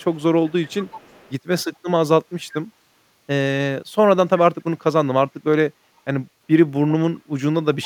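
A faint echo leak runs from 0.00 to 0.22 s, about 30 dB under the speech, then a stronger one from 0.47 to 1.33 s and again from 7.82 to 7.86 s, both about 20 dB down. Each is a delayed copy of the speech trailing by 376 ms, likely because a far-end loudspeaker's echo canceller let some of its microphone pickup return. Unlike room reverberation, the copy arrives at one fixed lag as a separate repeat, not a smooth decaying tail.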